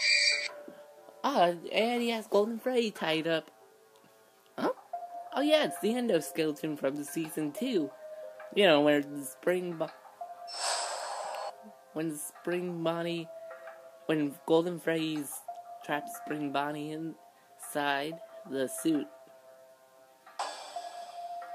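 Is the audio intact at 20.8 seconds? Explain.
Yes, the audio is intact at 20.8 seconds, with no fault to be heard at that moment.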